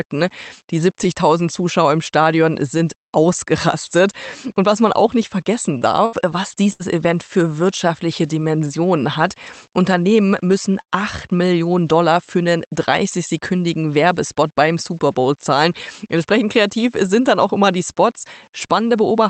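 The audio passes through an Opus call path, and its top end stops near 8 kHz, which fits a wideband call setting. Between 5.77 and 6.85 s there is repeated packet loss, giving a robotic sound. Three separate holes open in that stretch. The longest is 69 ms. Each one is covered by stretching the last bit of sound, so about 17% of the span is concealment. Roughly 200 ms gets rebuilt this way, and about 120 ms of real audio never arrives. The result is choppy, with pieces skipped. At 10.81 to 10.90 s comes a burst of packet loss. About 60 ms in a row fails to arrive in time. The receiver holds the last sound for about 57 ms and fades it, so a held buzz or a thinning hiss replaces the real audio. Playback then picks up further on, with that stretch gone. At 11.17 to 11.23 s a lost packet is rebuilt from error correction. The following packet carried a low-bitrate spare copy of this 60 ms, and the decoder plays that instead. 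So nothing drops out. The patch sounds rougher and noisier than its surroundings, a brief grainy smear rather than a gap.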